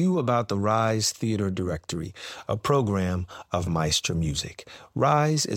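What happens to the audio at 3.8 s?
Nothing goes wrong at 3.8 s; the speech carries on intact through that moment, with no dropout, click or other fault.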